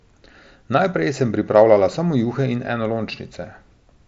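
Nothing in this speech stands out as a fault, and the way everything stops at about 7.8 kHz is just what you'd expect from a Bluetooth headset link on the mSBC codec.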